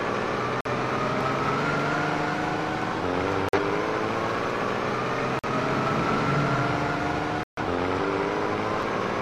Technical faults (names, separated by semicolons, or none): corrupt frame muted; dropped buffer (overrun)